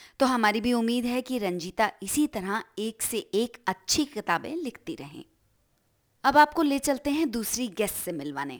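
Throughout the speech, sample clock jitter adds a fine hiss riding on the louder, brighter moments, about 25 dB below the signal, from timing wobble of roughly five microseconds. Unlike a steady noise floor, it vanishes in pauses and swells on sibilants.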